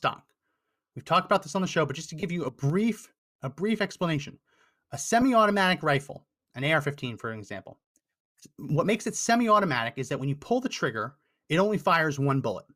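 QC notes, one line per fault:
2.20–2.23 s and 5.21 s, lost LE Audio frames: about 30 ms between "show but just to" and "you a brief a", then about 10 ms, filled by the likely LC3 decoder repeating the last spectrum with randomised signs, so the speech briefly smears into noisy grain.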